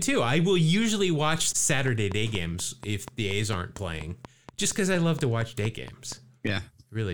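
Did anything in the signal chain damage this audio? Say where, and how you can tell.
Yes. A train of clicks runs from 1.88 s to 6.13 s: about twenty near-identical pulses at a regular 4.24 per second, peaking around 10 dB above the speech and audible through pauses. That steady pacing likely points to interference coupled into the analogue wiring.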